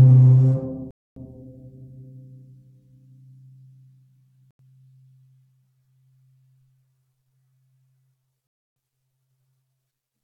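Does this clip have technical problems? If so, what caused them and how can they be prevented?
Yes. The music cuts to silence at 0.91–1.16 s, 4.51–4.59 s and 8.47–8.76 s, gaps of 256, 85 and 292 ms. These are likely Bluetooth stalls: interference delayed packets, the headphones' buffer ran dry, and playback paused until resent packets arrived. A waveform shows each gap as a flat line, and a spectrogram shows a blank vertical band. Keeping the phone close to the headphones and away from Wi-Fi routers and other 2.4 GHz sources prevents these dropouts.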